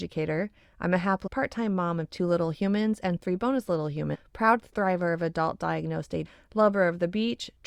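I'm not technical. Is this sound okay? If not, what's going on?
No, there are two brief glitches in this speech recording, both caused by damaged data in a compressed stream. Part of the stored file was corrupted, so the player briefly lost its place, then skipped ahead to the next readable piece. Each time you hear a short chirp, squawk, click or brief gap. The first is at 1.26 to 1.28 s, between "I'm a" and "part time mom of". The second is at 4.14 to 4.16 s, between "and three bonus little" and "proud thriver of adult".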